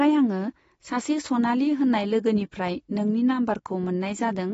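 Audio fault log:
Throughout, AAC compression: likely a low-bitrate AAC-LC encode, around 24 kbps, removing everything above 7.6 kHz and leaving speech dull and smeared, with plainly audible warbling or fizz on sibilants.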